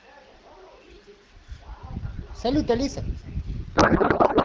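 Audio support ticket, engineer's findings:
Garbled, warbling noise replacing speech, 3.76 s to end of clip. Codec payload misread: octet-aligned AMR-WB frames (sound fits 12.65 kbit/s) unpacked as bandwidth-efficient, fields shifted, decoder outputs nonsense.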